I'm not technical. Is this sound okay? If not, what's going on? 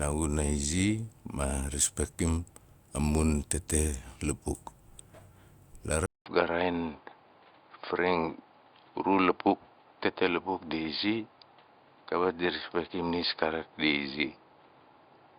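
No. At 6.06 s the speech drops out for about 0.2 s, then stays duller and boxier to the end, with nothing above 4.8 kHz and a faint new background noise, while the voice stays at the same loudness. This points to an input switched to a poorer device, likely another microphone or headset.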